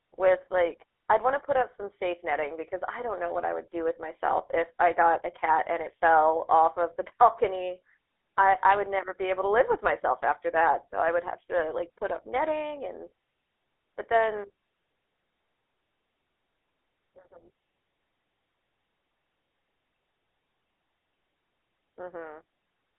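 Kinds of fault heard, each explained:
GSM full-rate codec: the old mobile-phone coder rebuilds the voice from a vocal-tract model driven by sparse, evenly spaced pulses. Here the speech has that buzzy, gravelly grain throughout, plainly audible, and sits in a 300 Hz to 3.5 kHz band, consistent with a 13 kbps stream.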